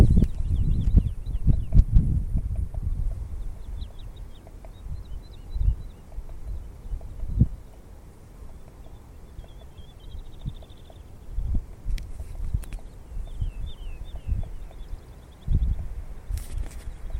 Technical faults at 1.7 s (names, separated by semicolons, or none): call bitrate drop